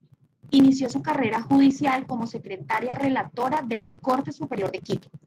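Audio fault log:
2.89–2.96 s, short concealed packet loss: a brief smear in the speech where about 40 ms never arrived in time and the receiver extended the preceding sound before blending back.
2.93–2.95 s, lost packet rebuilt from error correction: a rougher, noisier 20 ms patch where the decoder played a low-bitrate backup copy carried in the following packet, so no gap opens.
3.74–4.01 s, long network dropout: a fading buzz or hiss lasting about 240 ms in place of speech, likely the receiver extending the last sound while no audio arrived, before speech resumes minus the lost part.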